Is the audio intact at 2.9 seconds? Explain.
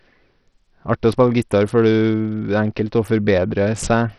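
No, at 2.9 seconds the speech carries the same damage it has throughout the clip, and it sounds like Bluetooth SBC compression. Nothing comes through above 14.2 kHz, the remaining treble is thin and flickery, and there's a gritty edge on everything, which fits a starved bit budget of around 64 kbps. The likely mechanism is SBC's simple sub-band split handing its upper bands almost no bits and quantising the rest roughly.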